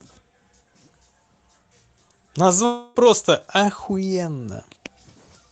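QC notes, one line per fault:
2.65–2.98 s, long network dropout: roughly 0.3 s of speech never arrived; the receiver likely stretched the last sound into a fading buzz before speech resumed.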